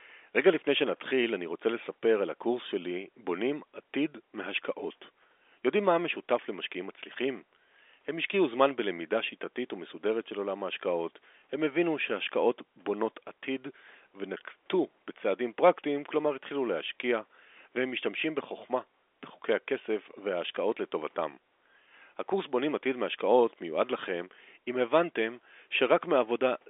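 No technical faults can be heard anywhere in this speech recording.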